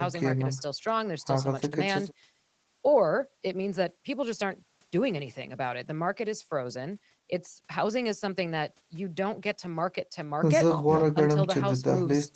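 Listening to this speech recording, nothing stood out as a technical fault.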